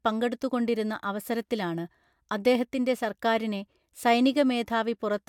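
No technical faults are audible.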